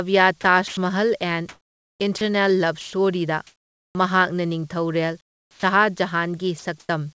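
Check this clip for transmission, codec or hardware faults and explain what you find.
Voice-detector faults appear throughout this speech, with the sound carried over a call path that passes nothing above 8 kHz, which fits a G.722 wideband codec at 64 kbps.

Sound chopped by the voice detector, 0.68 to 3.95 s: about 1.2 s in total is replaced in two or more pieces as the sender likely keeps switching transmission on and off. The speech turns choppy. A single dropout would not alternate like this.

Comfort noise in place of the background, 5.21 to 5.63 s and 6.59 to 6.89 s: during the pauses the real background gives way to a smooth, featureless hiss. In the first stretch it sits about 14 dB lower, with the background about 42 dB below the loudest speech. The steady texture sets it apart from a plain level drop.

Onset clipped by the voice detector, at 5.51 s: the first 120 ms of the returning speech is missing, likely filled by the same synthetic noise. 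The sound starts abruptly, with no soft lead-in. Only its beginning is lost, not a stretch within the phrase.

Sound dropped by the voice detector, at 6.59 s: 60 ms of speech is likely treated as background and replaced by steady noise before transmission resumes. It is a brief gap inside the sound rather than at its start, and that sets it apart from a clipped onset.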